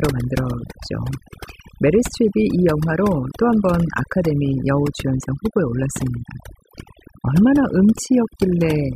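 Overdone noise removal runs throughout this speech recording: an over-aggressive denoiser strips frequency bands near its noise estimate, leaving twinkling near-silence.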